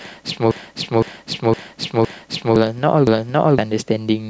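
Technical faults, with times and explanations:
0.51–2.56 s, repeated buffer: one 512 ms block of speech plays five times in a row, with an abrupt join each time it restarts. Fresh audio failed to arrive in time, so the device kept replaying its last buffer, and the block length fits an 8192-sample buffer. The result is a long stutter in place of roughly two seconds of speech.
3.07–3.58 s, repeated buffer: the same stall happens once more, with a single extra 512 ms replay. That piece is heard twice with a hard seam, and about half a second of speech is lost.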